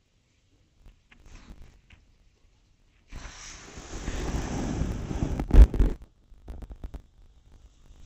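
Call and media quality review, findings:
Dull, robotic sound with a buzz at 50 Hz, throughout. Probable component: sample-format conversion. Interleaved audio read as planar: each 20 ms block's alternating left/right samples split into halves, both played together at half speed, an octave down. Blocks this short give the block-rate buzz and dullness rather than a clear octave drop.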